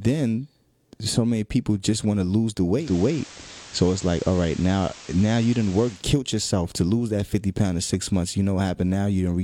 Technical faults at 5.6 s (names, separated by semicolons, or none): digital radio blending to analogue